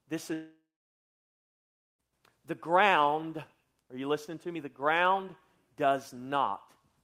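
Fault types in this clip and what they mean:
Long network dropout: from about 0.33 s to 2.01 s the speech simply stops arriving, most likely because the stream lost its packets somewhere along the network. The receiver smears the last bit of sound into a fading buzz for a few tenths of a second, then you get about 1.37 s of dead silence before speech picks up again, with the missing 1.66 s just gone rather than delayed.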